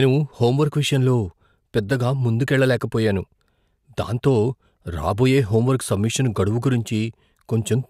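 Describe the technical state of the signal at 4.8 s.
Clock slip clicks run from 0.16 to 7.88 s: faint regular ticks about ten times a second, likely from unsynchronised clocks dropping or repeating one sample each time.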